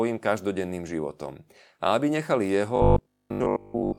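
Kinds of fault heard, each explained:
Robotic sound from repeated short buffers: audio likely arrived too seldom, so chunks of about 20 ms were looped, forcing a rigid, metallic 50 Hz buzz from 2.76 s.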